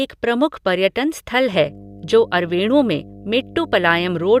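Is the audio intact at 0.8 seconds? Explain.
Yes, the speech at 0.8 seconds is intact, with no audible fault at that moment.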